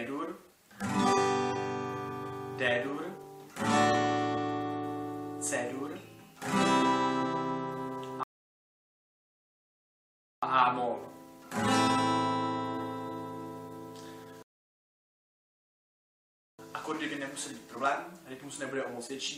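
Two rebuffering stalls interrupt this audio. The first runs from 8.23 to 10.43 s. The second runs from 14.43 to 16.59 s. Each time the sound drops to silence for about 2.2 s. Then it picks up at the exact point where it stopped. Nothing is skipped or repeated. The player simply ran dry of downloaded data and waited for more to arrive. Together the two pauses add about 4.4 s to the playback.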